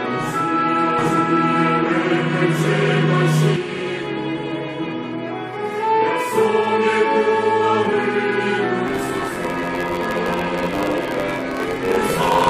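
From 0.98 to 3.56 s there's a doubled audio track: a second, equally loud copy trails about 0.7 s behind, dry and cutting in and out abruptly, likely from a slower capture path.

At 3.75 to 3.80 s, frames out of order give a short garbled flutter, as if two neighbouring frames of roughly 21 ms swapped places.

From 8.86 s to the end, a block size mismatch (truncated) chops off each block's tail. The result is a 91.9 Hz buzz, with the sound running 1.07 times fast at normal pitch, consistent with 512-sample blocks.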